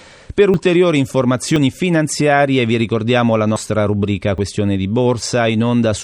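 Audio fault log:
0.54, 1.56, 3.56 and 4.38 s, dropped buffer (overrun): the speech skips forward each time, with no gap. At 0.54 and 4.38 s about 20 ms goes missing. Around 70 ms vanishes just before "finanziarie vi ricordiamo la" at 1.56 s and just after it at 3.56 s. Likely the recorder missed buffers that then got overwritten.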